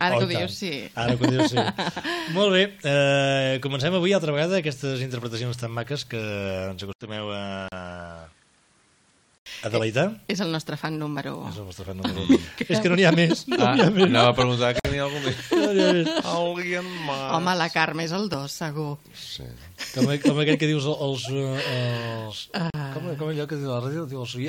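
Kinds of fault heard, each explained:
Input switched to a poorer device: From 6.93 to 9.46 s the sound suddenly narrows. Nothing is present above 10.5 kHz, so it turns duller. An 80 ms silence marks the change. A faint new background noise appears, well below the signal. The level stays about the same. The likely cause is the recording input moving to a lesser microphone or a headset profile mid-take, then back again.
Gap at a join of encoded pieces: Three brief silences cut into continuous sound. They fall at 7.68 s for 37 ms, at 14.80 s for 51 ms, and at 22.70 s for 39 ms. Their edges are smeared by the codec, so the fully silent part is shorter. After each one, the sound resumes exactly where it stopped. Separately encoded segments were joined without trimming the start-up delay and end padding that each encoding adds.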